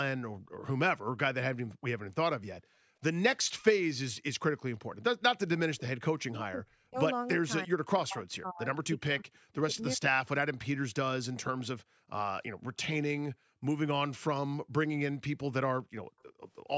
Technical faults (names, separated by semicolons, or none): background gated by the echo canceller; speech suppressed in double talk; echo leak